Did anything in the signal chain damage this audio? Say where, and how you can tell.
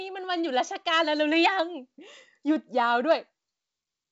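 No, nothing in the chain has damaged this speech. It passed through G.722 wideband telephone coding at what sounds like the full 64 kbit/s rate, which leaves only faint traces of the codec and a band edge with nothing above about 7.7 kHz.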